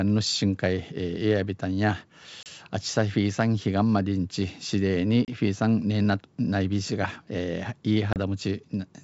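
Packet loss on an ADPCM call strikes the speech three times, at 2.43–2.47 s, 5.25–5.29 s and 8.13–8.18 s, each time dropping about 30 ms of audio, which fits a few lost packets. The gaps were filled with silence, so each one looks like a flat, hard-edged blank in the waveform and a clean vertical gap across the spectrogram. Afterwards the receiver's ADPCM predictor and step size no longer match the sender's, so the speech comes back slightly distorted before settling. Around these gaps, the wideband G.722 band still reaches up toward 7 kHz.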